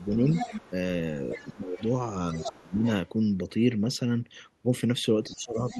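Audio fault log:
0.00–0.72, 1.25–1.95, 2.32–3.09 and 5.29–5.78 s: other side's voice leaking through. A second voice sits under the talker, about 10 to 25 dB below. It is likely loudspeaker echo that the echo canceller failed to remove from the microphone.
1.35–1.81, 2.45–2.84 and 5.26–5.80 s: speech suppressed in double talk. The talker's level dips by up to about 20 dB while the other side speaks. The echo canceller likely could not separate the two voices and turned both down.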